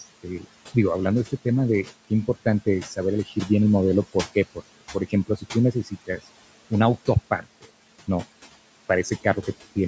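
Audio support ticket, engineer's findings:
Noise suppressor artifacts, whole clip. Room noise sits about 19 dB under the speech and gets pulled down by about 18 dB between phrases, then swells back under them. The suppressor's per-band gain is pumping frame by frame.

Speech cut by the noise suppressor at 3.26–3.5 s, 4.81–5.55 s and 5.73–6.19 s. Soft bits get swallowed, dropping by about 9, 18 and 11 dB, each time only for a brief stretch inside those windows. The suppressor is mistaking low-level speech for noise and ducking it.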